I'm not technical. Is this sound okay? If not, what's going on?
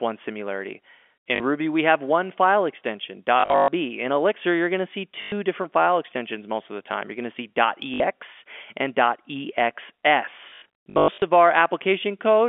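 No. The speech has packet loss with last packet repeated: bits of the signal went missing in transit, and the receiver filled each gap by replaying the last piece it had. That gives a short robotic stutter with a buzz, which fits pieces about 20 ms long. It happens at 1.36–1.40 s, 3.40–3.68 s after "have one file extension", 5.22–5.32 s between "you're going to see" and "different file extensions most", 7.94–8.00 s, and 10.5–11.2 s.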